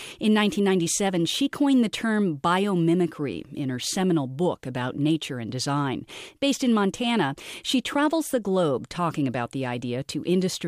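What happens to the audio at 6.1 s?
Nothing goes wrong at 6.1 s; the speech runs on intact through that moment, with no dropout, click or distortion.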